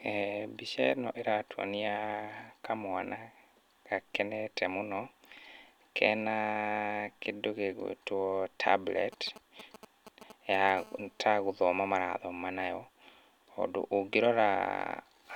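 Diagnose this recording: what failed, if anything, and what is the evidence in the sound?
Between 9.13 and 10.70 s, GSM signalling bursts break into the speech as a galloping dit-dit-dit of short rasps at a 217 Hz burst rate, roughly 15 dB below the speech. The fault sits in the analogue wiring: a nearby 2G phone exchanging signalling traffic radiates RF pulses that an amplifier junction rectifies into audio. A spectrogram shows clustered vertical stripes with a 217 Hz harmonic comb, and the waveform shows grouped square-edged spikes.

From 10.77 to 12.04 s the interference turns into a steady GSM phone buzz, a hard, raspy 217 Hz tone with dense harmonics at about 27 dB below the speech and no relation to it. The phone has moved into a call and is transmitting in bursts 217 times a second, and the same analogue stage demodulates the burst envelope. On a spectrogram it appears as an unbroken comb of horizontal lines at multiples of 217 Hz. 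The waveform carries a regular pulse train under the speech.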